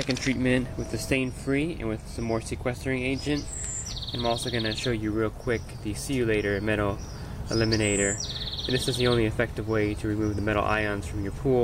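For the first 4.0 s the audio is thin, with missing or synthetic-sounding treble and stronger codec artefacts, then it turns clearer at once. This is an adaptive stream starting at a low bitrate, consistent with roughly 40 kbit/s HE-AAC stepping up to 96 kbit/s AAC-LC. Unlike a rebuffer, the switch leaves no gap.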